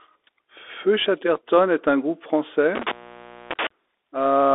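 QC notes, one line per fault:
throughout: Bluetooth CVSD headset codec. The speech is squeezed into a telephone-like band of roughly 300 Hz to 3.6 kHz, consistent with a 64 kbps one-bit delta stream whose step size chases the waveform. Loud, bright passages outrun the step and distort, s sounds turn scratchy, and a granular hiss sits under everything. The spectrogram shows a hard ceiling near 3.6 kHz, a thin floor below 300 Hz, and speckled noise filling the band.
2.75–3.67 s: intermittent contact. A loose plug or cable connection opens partway through this span, and the sound drops out for about 0.59 s. The breaks in the circuit are heard as crackle at each edge of the gap, with faint hiss while the line is open. On the waveform the envelope collapses to near-flat with sharp spiky transients at the break and reconnection. The spectrogram shows a vertical gap bracketed by broadband clicks.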